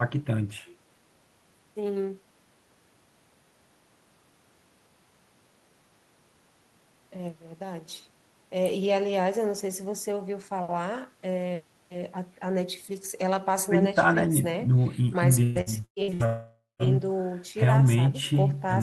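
From 15.43 to 16.23 s the speech turns choppy, the sound of repeated packet loss (robotic sound). Five separate gaps fall in under a second, the longest about 117 ms, and each one is patched by stretching the last received sound. Roughly half of this stretch is concealment, not real audio. On a spectrogram, the harmonics flatten into short smeared bars that repeat the same frame, broken by small jumps, and the waveform shows looped, over-regular segments.

Almost immediately after, from 16.26 to 16.94 s, the audio drops out for a longer stretch, most likely a long network dropout. The speech gives way to a buzzy continuation of the last sound, which fades over roughly half a second, followed by about 180 ms of near silence before the speech resumes without the lost portion. On a spectrogram this looks like a fading smear and then an empty band. The waveform shrinks to a decaying tail and then a flat line. 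Throughout, the spectrum stops near 12 kHz, which fits an Opus call path.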